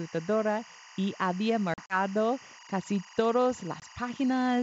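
Timecode bleed runs through the whole clip. A chirping warble sits about 20 dB below the speech. It flips between tones near 1 and 2 kHz. That pattern fits linear timecode at 23.976 frames per second leaking in from a nearby track or cable.

Packet loss on an ADPCM call hits from 1.74 to 1.97 s. About 80 ms drops out in hard-edged gaps scattered over 160 ms, the longest 40 ms. That points to roughly four lost packets. The decoder's predictor loses sync with the sender. Speech returns slightly distorted before settling. A second, single-packet gap of 20 ms comes at 3.80 to 3.84 s, with the same brief recovery glitch.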